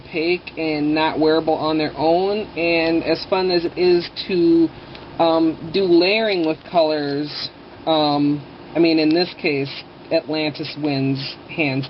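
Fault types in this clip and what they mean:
call bitrate drop: the call's bandwidth estimate fell and the encoder was cut from 64 to 17 kbps between 3.66 and 7.55 s, coding more coarsely and narrowing the band from 20 kHz to 8 kHz, so the sound turns muffled and rough for about 3.6 s.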